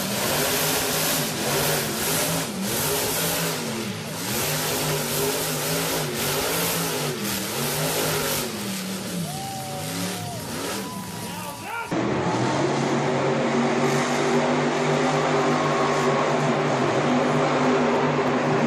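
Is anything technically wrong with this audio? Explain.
Yes. From the start to 2.24 s there is a doubled audio track: a second full-band copy trails by roughly 150 ms at about 5 dB lower, with no room colour. This is likely a slower duplicate capture path, and the echo stops abruptly at 2.24 s.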